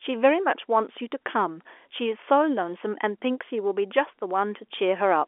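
Nothing goes wrong here: the speech just comes through the ordinary telephone line, G.711 coding with its familiar narrow band running up to about 3.4 kHz.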